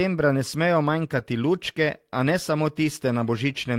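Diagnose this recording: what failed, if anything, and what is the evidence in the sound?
This is a network loss covered by the codec: a lost packet rebuilt from error correction at 1.15 to 1.17 s, between "ne smejo" and "lučke a ne samo". There's no gap, but about 20 ms sounds rougher and noisier, which fits a single dropped packet. The next packet carried a low-bitrate copy, and the decoder played that instead.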